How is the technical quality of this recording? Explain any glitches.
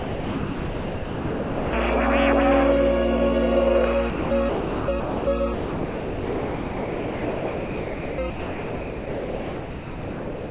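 The recording repeatedly gives way to steady comfort noise, and nothing reaches above 4 kHz, which fits a narrowband call codec. This is sound dropped by the voice detector, at 0.00–1.73 s, 4.10–4.31 s, 4.49–4.88 s, 5.00–5.27 s, 5.54–8.18 s and 8.30 s to the end. The sender's detector likely mistook the sound for background and stopped transmitting, so the receiver filled those gaps with noise.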